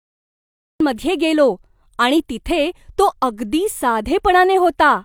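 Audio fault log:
0.00–0.80 s, cut-off start: the clip holds digital silence until 0.80 s, then the speech enters abruptly in the middle of a sound, with no natural attack or fade-in. Capture or streaming began late, so the start of that sound was never recorded.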